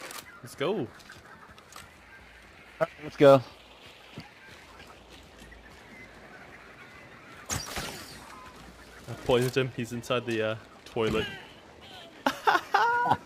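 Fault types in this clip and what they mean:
Drift correction step: twice, from 5.35 to 6.25 s and from 10.63 to 11.84 s, the sound slows by 6.4% and drops about 115 cents, then snaps back. This is likely a clock-matching resampler jumping rate. Unlike wow, the shift is abrupt and steady, not wavering.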